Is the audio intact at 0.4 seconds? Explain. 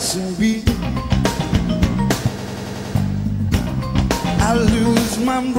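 Yes, the audio at 0.4 seconds is intact, with no dropout, click, distortion or other fault at that moment.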